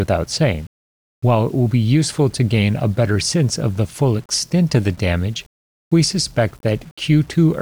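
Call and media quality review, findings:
Low bit depth without dither, whole clip: grainy distortion that tracks the speech, with quiet tails turning gritty or sputtering. Likely cause: 7-bit rounding, error around 35 dB below signal. Waveform shows stair-stepped levels; spectrogram shows broadband hash following speech energy.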